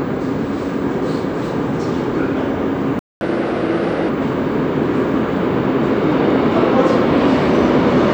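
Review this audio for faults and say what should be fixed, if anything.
A playback stall cuts the sound at 2.99 s and leaves about 0.22 s of silence until 3.21 s, likely because the player's buffer ran dry or its thread was blocked. The waveform drops to a flat line, and the spectrogram shows a blank vertical gap.

Catch-up at higher speed follows from 3.21 to 4.09 s. The player resamples its backlog at 1.25 times normal speed, so the audio runs fast and sits about four semitones sharp before settling. Spectrogram bands shift upward and the waveform looks compressed in time.

A larger playback buffer and a decode thread that cannot be blocked would prevent the stall, and time-stretching or brief, gentler catch-up would remove the audible pitch jump.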